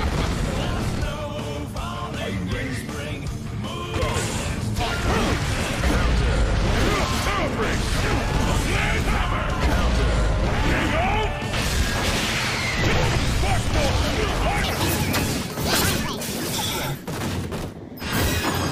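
At 14.64 s the sound jumps into a section at the wrong speed, and it stays there until the clip ends at 18.71 s. Playback runs about 1.92 times too fast. Pitch rises with it, by roughly ten semitones. Everything turns high, thin and hurried at once. The likely cause is a player or editor running this stretch on the wrong clock, so samples are read out far faster than they were captured.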